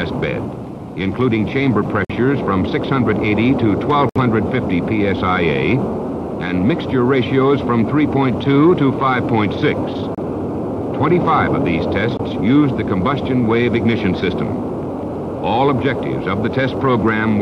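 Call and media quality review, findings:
Gap between stream segments: hard-edged silent holes at 2.05–2.10 s (49 ms), 4.09–4.16 s (63 ms), 10.15–10.18 s (29 ms), 12.17–12.20 s (21 ms). The holes fall near 2 s boundaries, which fits 2 s segments whose time stamps leave a gap the player pads with silence. Unlike a dropout, nothing is missing. The sound resumes exactly where it stopped, so the timeline is only pushed later.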